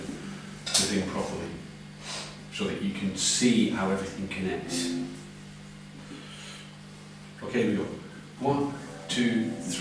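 Nothing stood out on listening.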